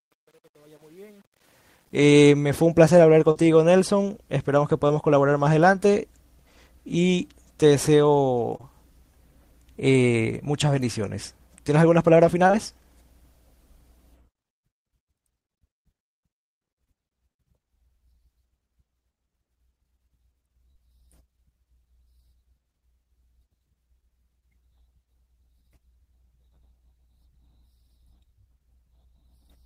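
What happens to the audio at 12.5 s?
Two short concealed packet losses run back to back from 12.47 to 12.55 s, each covering about 20 ms of speech that never arrived in time. The receiver's decoder patched both gaps by extending the preceding sound, carrying its pitch forward or shaping noise, before merging back into the real signal. The result is a brief smeared wobble lasting under a tenth of a second, where a short consonant may drop out entirely.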